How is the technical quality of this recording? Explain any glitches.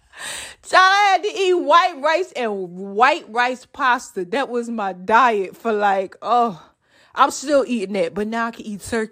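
No glitches or technical faults can be heard anywhere.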